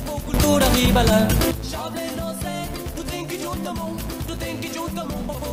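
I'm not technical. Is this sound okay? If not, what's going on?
No, there are two problems. The first runs the whole way through: a filter restarted on every block. Something smoothing the audio keeps forgetting what it was doing and starts fresh 200 times a second, so each restart leaves a tiny tick, and together they make a steady buzz that gets louder as the sound gets louder.

The second is a sudden gain jump from 0.34 to 1.51 seconds. The sound and the background hiss both snap to a clearly louder level at once, then drop back. The likely cause is a volume setting being applied instantly instead of faded in, which can also leave a click at each edge.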